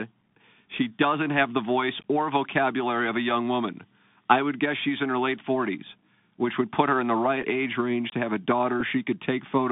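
Throughout the speech, the Bluetooth CVSD headset codec confines everything to roughly 150 Hz to 3.6 kHz, consistent with a 64 kbps CVSD link. Its one-bit delta coding leaves a grainy hiss, scratchy sibilants and strained peaks. A spectrogram shows a hard ceiling near 3.6 kHz over a speckled noise floor.

At 7.42 to 7.45 s, between "her in the right" and "age range to have", comes a Bluetooth headset packet repeated. About 7.5 ms of audio, which fits two lost 3.75 ms packets, was replaced by re-decoded old data, giving a brief buzzy tick. On the waveform it appears as a short stretch of duplicated cycles. A second repeat, also about 7.5 ms, follows at 8.80 s, just after "range to have a", and sounds like the same small tick.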